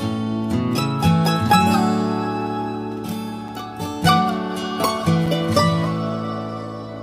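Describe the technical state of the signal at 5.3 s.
At 5.26 s there is a block of digital silence about 5.8 ms long, which fits a 256-sample buffer left unfilled in time and zeroed. Unlike a single-sample click, it cuts to silence and back with no fade, so it is heard as a tick or dip.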